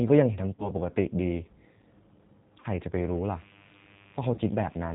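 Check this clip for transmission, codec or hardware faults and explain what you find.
Three faults are present: G.729 codec coloration across the whole clip, three brief packet-loss dropouts, and mains buzz in the second half.

The G.729 codec shapes the entire recording. The speech sounds narrow, slightly rough and synthetic, with nothing above 4 kHz. At 8 kbit/s, the codec rebuilds each 10 ms frame from a vocal tract filter, a pitch predictor and a few pulses, so the damage is plainly audible.

VoIP packet loss concealed by the speech codec occurs at 0.55 to 0.71 s, 2.60 to 2.66 s and 4.34 to 4.41 s. Each time, the speech smears into a buzzy tone or coloured noise that fades, and then sounds weak as it recovers. About 40 ms of audio went missing each time, which fits two lost packets. The decoder filled the gap by extending its last pitch and filter at falling gain. Because each frame builds on the previous one, the distortion lingers after the packets return.

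Mains buzz comes in at 2.98 s and continues to the end. It is a steady, raspy buzz sitting faint and well below the speech. Sharp switching spikes, twice per 50 Hz cycle, leaked into the signal path and spread harmonics up into the kilohertz range.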